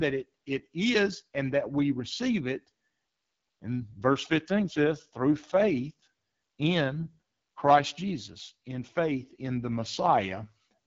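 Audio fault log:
Throughout, AMR wideband (HD Voice) codec: the speech sounds rough and raspy because a pulse-driven vocal tract model runs short of bits, which fits the 8.85 kbit/s mode. A spectrogram shows noise-like fill above 6.4 kHz and nothing above 7.6 kHz.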